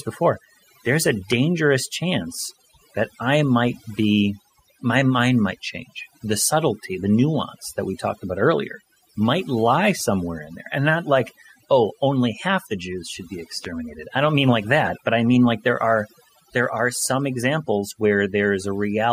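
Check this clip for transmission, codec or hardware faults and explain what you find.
Two faults are present: heavy-handed noise removal across the whole clip and two loud pops.

Overdone noise removal runs throughout. Aggressive per-band gating deletes frequency bands near the noise estimate, taking quiet parts of the voice with them and leaving a lowered, twinkling background.

Loud pops occur at 1.32 to 1.34 s, after "before there's a", and at 13.65 to 13.67 s, after "should be". Each is a single sharp pop roughly 10 dB above the speech, likely from a voltage step such as a switch or static discharge.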